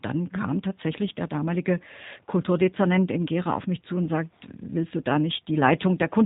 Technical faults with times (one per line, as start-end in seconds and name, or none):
0.00-6.26 G.729 codec